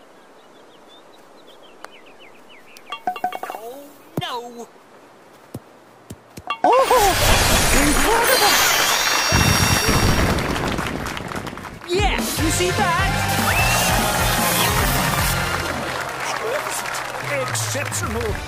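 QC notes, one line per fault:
13.29 to 15.33 s, pre-emphasis left on: the treble suddenly lifts, about 10 dB up at 10 kHz relative to 1 kHz, following the FM 50 µs boost curve with no matching de-emphasis cut afterwards, so the sound turns thin, bright and hissy-sibilant for those two seconds.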